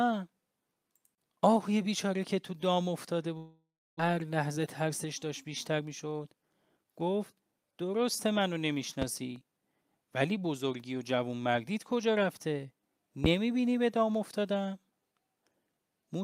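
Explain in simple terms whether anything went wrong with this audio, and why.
Between 3.37 and 4.01 s there is a long network dropout, most likely from packets failing to arrive. The receiver stretches the last bit of speech into a fading buzz, then goes quiet for about 0.29 s. When sound returns at 4.01 s, roughly 0.4 s of speech is simply gone. The gap also leaves the receiver holding a backlog of something like a fifth of a second of audio.

From 4.09 to 6.85 s a jitter buffer speed-up works off that backlog. The receiver snips out many tiny slices of speech, each only a pitch cycle or so long, so the talking plays about 7% faster while the pitch stays the same. Across those few seconds roughly 0.2 s is trimmed away, and the speech sounds slightly rushed until the delay is back to normal.

A loud pop is heard at 9.02 to 9.05 s, and another at 13.25 to 13.28 s. Each is a single sharp click sitting on top of the speech, which continues underneath. 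The second one is clearly louder than the first. The likely cause is a sudden electrical jolt, such as a loose plug, static discharge or a driver glitch, rather than anything in the speech itself.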